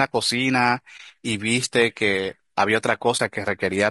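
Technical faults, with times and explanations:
Throughout, low-delay AAC compression: the speech sounds rough and grainy, with noise filling the gaps between the pitch harmonics and a top band that sounds thin and partly synthetic. The likely cause is a low-delay coder of the AAC-ELD type at a modest rate, fitting around 32 kbps. Its very short frames cannot separate closely spaced harmonics well, and with bits scarce the quantisation noise spreads across the spectrum and the upper frequencies are only approximated.
0.97–1.00 s and 3.17–3.20 s, AAC frame loss with muting: at each point the sound briefly drops away for about 20 ms and returns, leaving a short, soft-edged gap. A single coded frame went missing each time, and the decoder replaced its spectrum with silence. Because neighbouring frames overlap through their windows, the level tapers down into the gap and back up out of it rather than cutting off abruptly.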